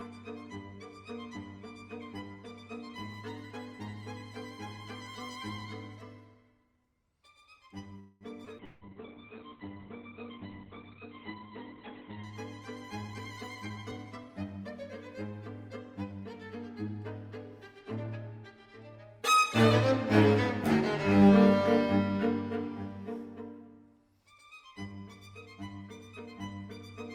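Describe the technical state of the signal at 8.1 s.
At 8.1 s you're right in the middle of a call audio freeze, running from about 7.99 to 8.24 s. The last bit of sound gets stretched into a fading buzz or hiss fill for roughly 0.2 s, then the audio picks up exactly where it left off, so nothing's lost but everything after lands about 0.2 s late. Likely cause: packets held up in transit, leaving the jitter buffer empty until they arrived.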